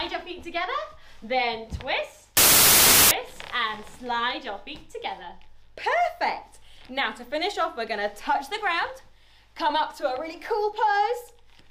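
From 2.37 to 3.11 s the reader assembled each sample from the wrong bytes, misaligning or reversing their order, so the rapidly fluctuating low-order bits ended up as the most significant part of every value. For those three quarters of a second the original sound is replaced by loud, harsh broadband noise, then stops abruptly at 3.11 s.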